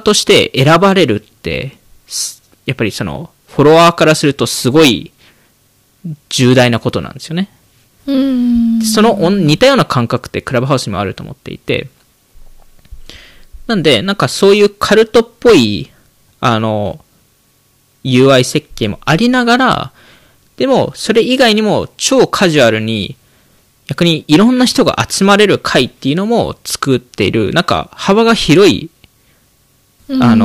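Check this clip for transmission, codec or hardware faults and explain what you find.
There is one fault, hard clipping, and it runs through the whole speech recording. Every louder syllable carries a harsh, buzzy fuzz, with a gritty edge on the peaks instead of clean attacks. The signal was driven about 12 dB beyond what a stage in the chain could pass, so a few percent of samples hit the ceiling and were sliced flat. Those squared-off tops add high harmonics that were never in the original sound, and those harmonics are the fuzz.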